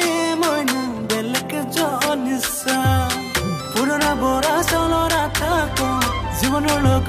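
At 4.58 s a mains hum appears and runs to the end of the clip. It is a steady low tone at 50 Hz, with some low harmonics above it. The hum is strong, sitting only a little below the sound itself. The power line has leaked into the signal path. A ground loop or a nearby transformer is the usual route.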